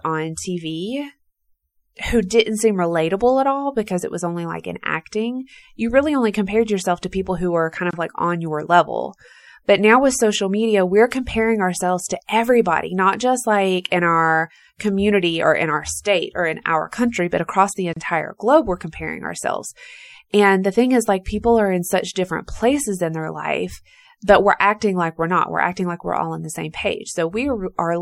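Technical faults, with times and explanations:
Throughout: MP3 compression. The speech sounds watery and dull, with swirly, chirpy s sounds. This is likely from low-bitrate encoding, which fits about 64 kbps.
7.91–7.93 s and 17.93–17.96 s: gap at a join of encoded pieces. Short silences of 25 and 32 ms cut the speech, ten seconds apart. Each join kept its encoder padding.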